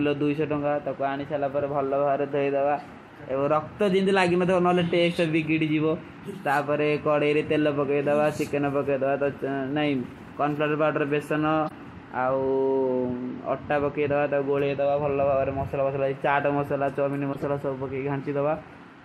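Just after "ତକ ଆନିଶାଲା", at 1.60 s, a corrupt frame is decoded. Damaged bits in one compressed frame make the decoder misplace energy in frequency. The result is a short blip peaking at about -25 dBFS. At 11.64 to 11.71 s, a few frames in a row fail the same way, giving a brief squeaky burst. After "ଚାଟ ମସଲା ଚୋମିନୀ", from 17.33 to 17.45 s, several frames break. That is the longest and loudest chirp, peaking near -15 dBFS.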